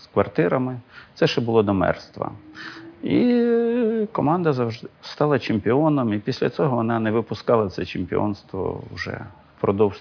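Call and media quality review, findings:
No audible faults found in this recording.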